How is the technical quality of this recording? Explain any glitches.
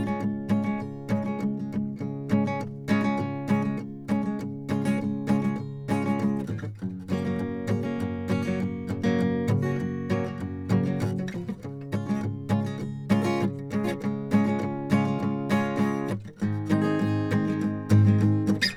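No audible glitches or faults.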